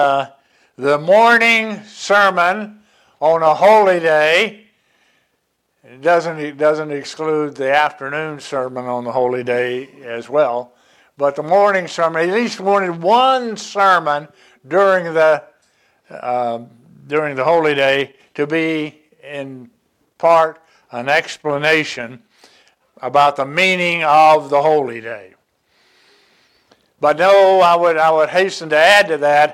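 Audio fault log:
No technical problems can be heard anywhere in the audio.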